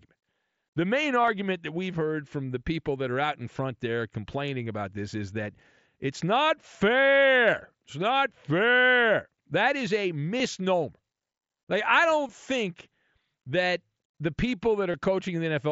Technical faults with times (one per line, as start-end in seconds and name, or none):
1.23-1.28 concealed Bluetooth headset packet loss
10.38-10.40 concealed Bluetooth headset packet loss
12.27 concealed Bluetooth headset packet loss
14.92 concealed Bluetooth headset packet loss